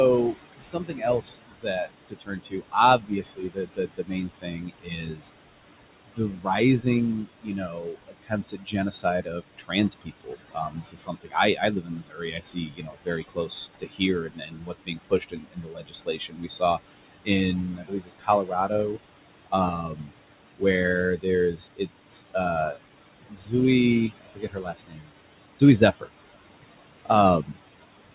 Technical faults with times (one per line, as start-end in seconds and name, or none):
0.00-28.14 noise suppressor artifacts
0.33-5.23 speech cut by the noise suppressor
6.05-20.62 speech cut by the noise suppressor
21.17-23.53 speech cut by the noise suppressor
24.09-26.48 speech cut by the noise suppressor
27.05-27.83 speech cut by the noise suppressor